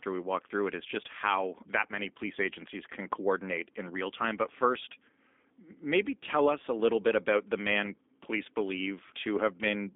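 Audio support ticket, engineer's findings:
G.729 codec damage, throughout. Speech band-limited to about 250 Hz–3.6 kHz, nothing above 3.8 kHz; rough, slightly synthetic texture, plainly audible. Probable component: G.729A VoIP leg. Mechanism: speech rebuilt from vocal tract filter, pitch predictor and sparse pulses per 10 ms frame, which fits an 8 kbit/s stream. Fine detail discarded, top end absent.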